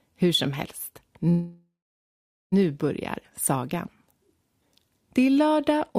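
At 1.29 s the sound stops moving forward and a call audio freeze begins. The last moment is stretched into a fading buzz. For about 0.82 s of the gap there is silence. Playback resumes at 2.54 s, exactly where it left off. Nothing seems to be lost. Instead, about 1.2 s has been inserted, and everything after it runs that much late. The likely cause is delayed packets draining the jitter buffer.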